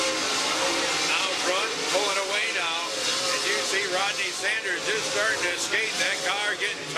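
No faults are audible anywhere in the recording.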